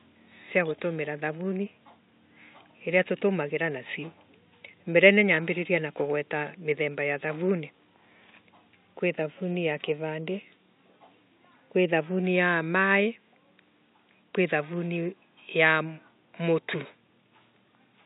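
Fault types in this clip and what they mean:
No system faults can be heard in the signal; the only background is the room noise picked up by the microphone, which sits about 51 dB below the speech.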